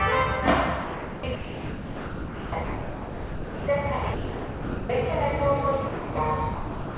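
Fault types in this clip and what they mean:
Sound dropped by the voice detector: six stretches, 0.27 to 1.17 s long, where the sound is replaced by steady, featureless noise, likely because the sender's detector took it for background. Unlike packet loss, the gaps hold even noise rather than clicks or smeared repeats.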